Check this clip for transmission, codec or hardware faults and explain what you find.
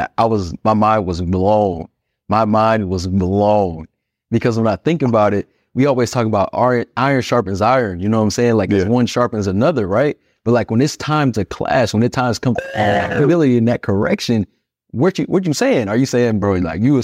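Nothing in this speech recording points to a transmission, codec or hardware problem. No dropout, glitch or other defect can be heard anywhere in it.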